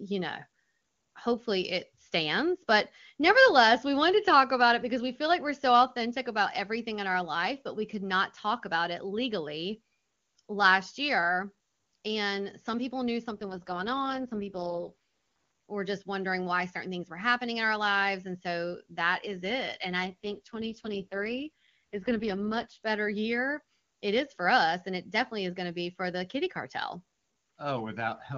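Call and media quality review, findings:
AMR rate drop, 13.31–14.91 s (right after "some people knew") and 20.05–22.78 s (just before "better year"): speech turns rough, raspy and synthetic, with no gap and no change in band. The roughness fits the AMR-WB HD Voice codec being pushed from 23.85 to 6.6 kbit/s on a weak radio link, trading bits for error protection, then restoring the rate.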